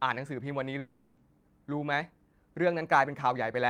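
From 0.79 s to 1.19 s the speech breaks off and is replaced by about 0.4 s of synthetic sound: the last fragment before the gap is stretched into a buzzy, hissing continuation that decays across the whole interval without dropping to true silence. When the speech resumes at 1.19 s, roughly 380 ms of material is simply absent. This is likely a long network dropout, where packet-loss concealment kept extrapolating until real audio arrived again.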